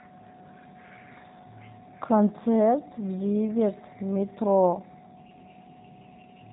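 Throughout, G.729 codec coding cuts everything above 4 kHz and leaves a rough, buzzy, synthetic texture, which fits 8 kbit/s pulse-based rebuilding rather than simple band-limiting.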